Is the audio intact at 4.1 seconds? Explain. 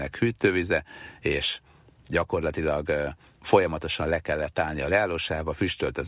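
Yes, at 4.1 seconds the speech plays through intact, with no audible fault at that moment.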